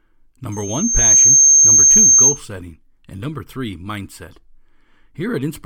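At 0.52 s a loudspeaker feedback squeal kicks in over the speech. It's a single pure tone at 6.4 kHz that swells for the better part of a second until it's sitting roughly 15 dB above the voice, then holds as a piercing whistle until it cuts out at 2.41 s. The mic was picking up the speaker it was feeding, and at that one frequency the loop gain went past one, so the tone just kept reinforcing itself.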